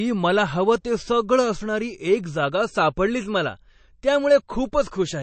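A speech recording that sounds dull and watery from start to finish, with a swirly, metallic shimmer on sibilants and attacks that smear rather than land cleanly. Nothing is present above about 8.3 kHz. The likely cause is heavy MP3 compression at a low bitrate, somewhere around 34 kbps: short of bits, the encoder has cut the treble at that fixed point and dropped weaker frequency lines that flicker in and out between frames.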